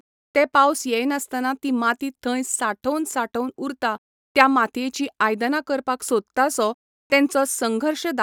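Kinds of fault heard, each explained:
No faults heard.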